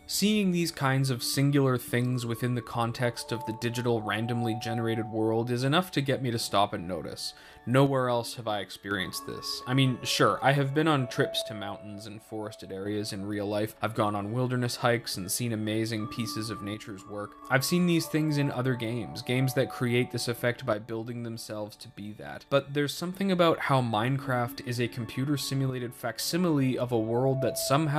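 One channel drops out at 7.87–8.91 s, 11.42–12.86 s, 16.74–17.42 s, 20.73–23.13 s and 25.70–26.19 s: the sound abruptly falls about 6 dB, likely one stereo side lost before mono summing.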